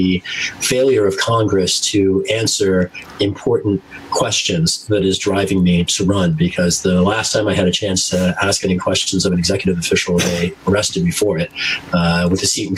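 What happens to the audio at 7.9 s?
At 7.9 s loud and soft passages are squeezed close together in level. This gain pumping runs through the whole clip, not just at this moment, and the level swings by roughly 20 dB. The likely cause is input gain set far too high for the microphone, with a fast limiter or compressor repeatedly clamping down on every loud sound and releasing in the gaps.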